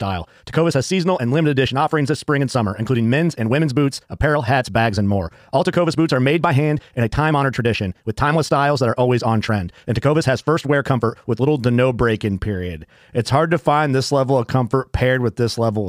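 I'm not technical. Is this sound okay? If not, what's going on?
No. From the start to 11.48 s there's a time-stretched section: the speech runs about 1.53 times too fast and sounds rushed, yet the pitch stays normal, which is likely the work of length-fitting software rather than plain fast playback.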